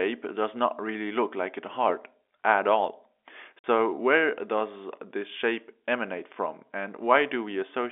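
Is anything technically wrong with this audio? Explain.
Yes, there is packet loss filled with silence from 3.59 to 3.64 s, just before "where does this". About 50 ms of audio is missing, which fits five lost 10 ms packets, and the receiver played silence in their place. You hear a brief dropout. On a waveform it shows as a flat gap with abrupt edges, and on a spectrogram as a blank vertical band across all frequencies. The G.711 telephone band, roughly 300 Hz to 3.5 kHz, can be heard around it.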